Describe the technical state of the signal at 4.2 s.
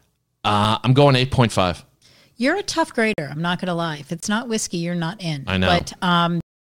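A block of digital silence runs from 4.20 to 4.23 s, a 23 ms hole where the speech drops to zero, which fits an output buffer of about 1024 samples that was not filled in time. The abrupt cut and return are heard as a brief dropout.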